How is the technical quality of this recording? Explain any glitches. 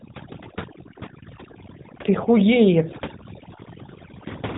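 The technical quality is poor, with two faults audible across the whole clip.

Overdone noise removal runs throughout. The background drops and breaks up into twinkling specks. A noise reducer set too hard is muting individual frequency bands that dip near its noise estimate, taking quieter parts of the speech with them.

The AMR narrowband mobile codec is also present throughout. The speech has a plainly audible buzzy, synthetic edge, and nothing reaches above 3.8 kHz. AMR-NB rebuilds speech from a vocal-tract model excited by a few pulses per subframe, and the degree of buzz points to a mid-range bitrate near 10 kbps.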